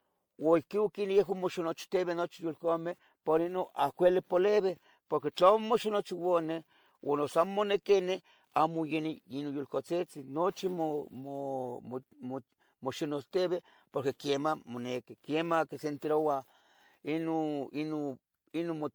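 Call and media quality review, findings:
Generation loss throughout: swirly, hollow speech, smeared attacks; spectrogram shows flickering holes below 20.1 kHz ceiling. Likely MP3 re-encoded about seven times, fitting 96 kbit/s.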